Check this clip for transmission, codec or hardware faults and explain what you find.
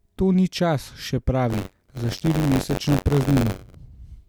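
One fault here: buffer tearing from 1.49 to 3.75 s. The writer and reader slipped, so about a tenth of each buffer replays audio roughly 40 ms old. That gives a robotic 93.8 Hz buzz, which fits a 512-sample buffer.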